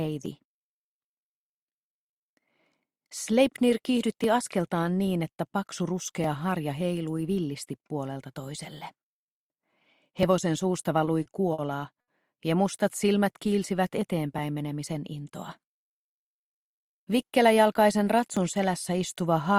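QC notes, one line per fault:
0.26 to 18.37 s, periodic USB or driver dropouts: about ten tiny skips, one every 2.0 s, each losing roughly 2 ms of audio that is simply cut out, not replaced by silence. A background task holding up the USB bus or audio driver at a fixed interval explains this. Unlike a network glitch, the clicks keep strict 2-second spacing, stay very short, and hold nothing over; they tick only where there is signal.
11.05, 11.23, 11.53 and 12.01 s, short stall from a late packet: four clustered holds where the jitter buffer ran dry and the receiver stretched the last sound until the packet arrived, then resumed at the same point. The stalls last 20, 20, 50 and 70 ms. Each adds that much delay, and the last adds about 3 ms more. Nothing is lost, which sets these apart from the dropouts. They sound like brief sustains with a faint buzz, clustered rather than evenly spaced.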